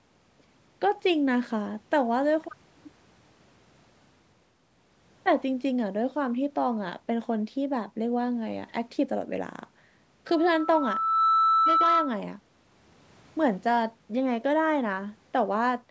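From 10.27 to 12.21 s, loudspeaker feedback squeal takes over. The mic hears its own loudspeaker. A 1.3 kHz tone swells for about a second, ending louder than the speech.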